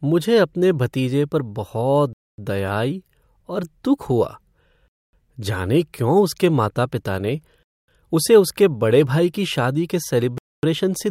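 At 2.13, 4.88, 7.63 and 10.38 s the speech drops into a 0.25 s silence, right after "अपने भतीजे पर बहुत", "आई और दुख हुआ" and "भाई की शादी के". It's a gap between chunks: each 2.5 s block plays whole, but silence sits at every join.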